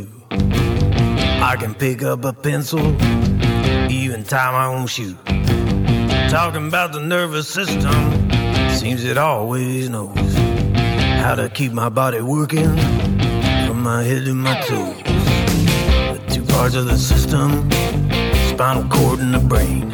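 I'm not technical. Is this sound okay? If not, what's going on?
Yes, this sound is okay, and nothing is going on with it that needs fixing.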